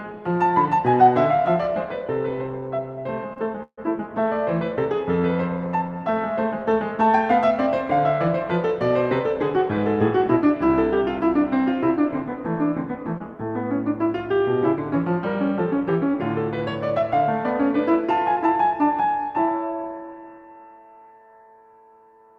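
A music recording, marred by network-delivery faults typical of a real-time call path. From 3.33 to 3.79 s there are repeated stalls (stutter): the jitter buffer ran dry three times as packets arrived late, and each time the receiver extended the last sound rather than leave silence, fading it through the longer holds. About 180 ms of that half-second is filled-in continuation, roughly 39% of the span, with the longest hold 146 ms, so the music drags and hiccups even though no material is actually lost. At 13.18 to 13.22 s a short concealed packet loss occurs: about 20 ms of audio never reached the decoder in time, and the receiver bridged the hole with roughly 19 ms of continuation from the preceding sound before blending back in, heard as a brief smear or wobble where a moment of the music is gone. From 15.77 to 18.47 s a jitter buffer speed-up sets in: with more audio queued than the buffer targets, the receiver repeatedly cut out short pitch-period-sized slices, around 70 ms in total, so the passage runs at about 103% speed with pitch unchanged and the tempo loses its steadiness.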